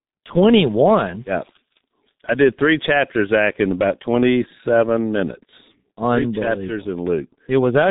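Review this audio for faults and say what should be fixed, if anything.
G.723.1 codec damage runs through the whole recording: nothing above 3.8 kHz survives, so the speech sounds muffled, and 30 ms frames at a rate that fits 6.3 kbit/s smear consonants into a hoarse, heavily coded texture. To prevent it, capture or transmit with a wideband, higher-bitrate codec instead of G.723.1.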